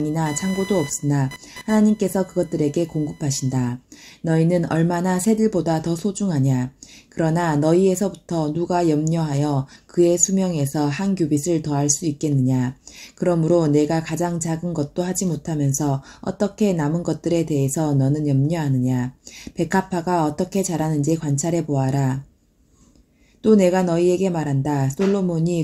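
From 0 to 3.68 s there is computer activity noise: a buzzy, chirping whine pulsing at around 1 kHz, roughly 20 dB below the sound. Processor or peripheral load shifts the audio circuit's shared ground, so the interference follows the machine's activity, not the audio.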